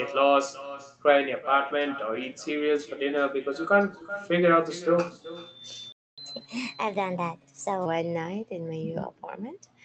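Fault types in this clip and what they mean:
echo with no canceller: The far end's loudspeaker feeds back into its microphone and nothing strips it out, so every phrase of this speech returns roughly 0.4 s later as a thinner copy sitting about 17 dB below the talker throughout the clip.
playback stall: The player's output went silent from 5.92 s to 6.18 s, a gap of about 250 ms, most likely because its buffer ran dry or its thread was held up, so the speech halts mid-flow before resuming.
catch-up at higher speed: Having fallen behind during the stall, the player resamples its backlog to play it 1.15 times faster from 6.18 s to 7.86 s, lifting the voice about two semitones in pitch before speed and pitch settle back to normal.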